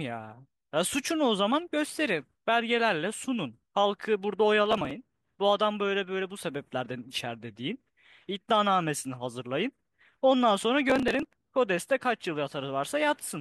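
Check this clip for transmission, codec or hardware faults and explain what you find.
There is one kind of fault here, processor overload crackle, heard twice. From 4.66 to 4.91 s and again from 10.90 to 11.50 s, a gritty, tearing crackle runs over the speech and then stops cleanly. The processor fell behind and missed a long run of short buffer deadlines, each only a few milliseconds long. Every missed buffer was skipped outright, so the sound is chopped into many hard-edged gaps. The second burst is longer, with roughly twice as many missed deadlines.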